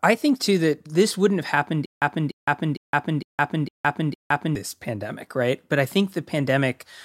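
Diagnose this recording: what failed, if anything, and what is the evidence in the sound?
Stutter with silent gaps from 1.86 to 4.55 s: a 296 ms fragment replays six times, 161 ms silence between, likely a stalled playback buffer retrying.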